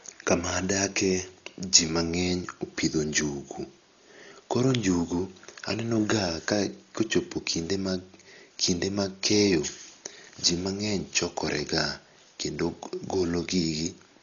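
Throughout this speech clip the sound is dull and boxed-in, with nothing above 6.9 kHz, and a rough, fluttering noise clings around the tonal parts of the voice, pointing to heavy codec damage. The likely cause is Dolby Digital compression at a low rate, one that fits roughly 40 kbps: the encoder narrowed the band and left many frequency lines with no mantissa bits, so the decoder filled them with dither noise.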